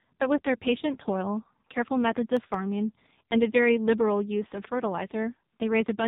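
The whole clip carries heavy AMR narrowband mobile codec damage. Nothing passes above 3.8 kHz, and the low bit rate, near 5.9 kbps, leaves the speech buzzy and synthetic. From 2.19 to 3.24 s come CD scratch ticks: seven short clicks or tiny dropouts, each about two milliseconds at most. Each is a blemish the player could not repair.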